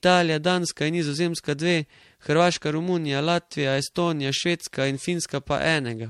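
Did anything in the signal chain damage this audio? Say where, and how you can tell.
Yes. Generation loss runs throughout the speech, at the codec stage: swirly, hollow smearing, blurred attacks and nothing above 16.4 kHz, which fits a 64 kbit/s MP3 chain. It is likely from about three decode-and-re-encode passes, each quantising on a shifted frame grid.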